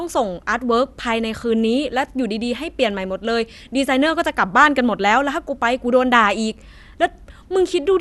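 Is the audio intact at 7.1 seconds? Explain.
No. At 7.1 seconds the speech carries the same damage heard across the whole clip: nothing reaches above 12.2 kHz, leaving it dull, and a gurgling, granular roughness sits on the voice. This is likely MP2 compression at a starved bitrate, consistent with roughly 80 kbps. Layer II divides the spectrum into 32 sub-bands and shares out bits; with so few, the top bands are shut off and the rest quantised coarsely, so bands flicker and grain appears.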